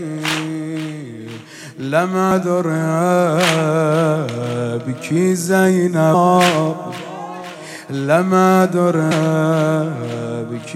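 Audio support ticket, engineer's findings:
Damaged data in a compressed stream: short glitches at 2.30 s, 6.13 s and 9.10–9.12 s. The decoder misreads the corrupted frames there, loses sync and hunts for the next frame header.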